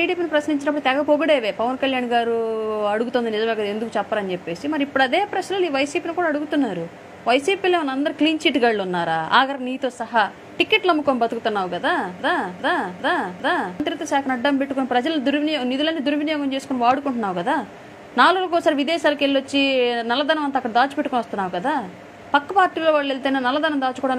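Something in the playback or streaming chain likely stalled at 12.20 s and kept re-sending the last fragment it held, producing a broken-record loop that runs until 13.80 s. A slice of audio about 0.4 s long plays four times back to back, each repeat identical, giving a stuttering, mechanical cycling effect. Whatever should have been heard during those 1.6 seconds is simply missing, and the sound picks up again after the loop ends.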